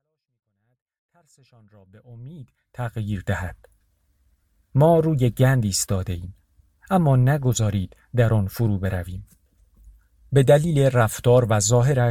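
No faults in the speech; the level rises smoothly from the opening to full by 3.32 s, an ordinary editorial fade-in with no step or click.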